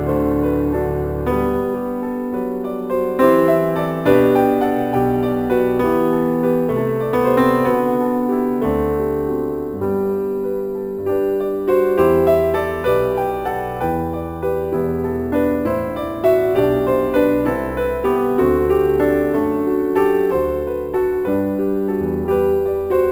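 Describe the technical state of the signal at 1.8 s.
At 1.8 s the signal carries crude rate conversion, present across the whole clip rather than at this moment alone. Samples were repeated by nearest-neighbour selection with no interpolation filter, which fits a step from 32 kHz up to 44.1 kHz. The uneven repetition pattern generates shifted, inharmonic images of the sound, sitting roughly 30 dB below it and heard as a gritty, inharmonic fizz that tracks the louder and brighter parts of the sound.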